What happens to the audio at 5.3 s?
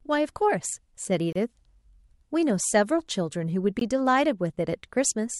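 Nothing goes wrong at 5.3 s; the speech there plays through intact, with no dropout, click or distortion.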